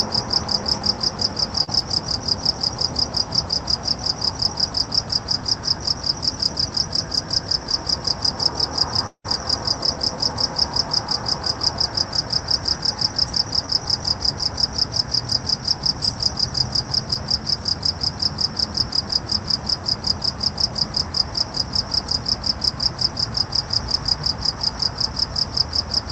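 At 1.63 s, short concealed packet loss: about 40 ms never arrived in time and was filled by extending the preceding audio, heard as a brief smear. The same fault returns at 13.66 s and 17.14 s, each about 20 ms long, as brief smears.

From 9.07 to 9.26 s comes what is likely a long network dropout. About 180 ms is lost, and the concealment buzz fades into roughly 70 ms of silence. The waveform shows a decaying envelope sinking to a flat line before the audio resumes.

Throughout, the content above 8 kHz is absent, consistent with an Opus call path at around 32 kbps.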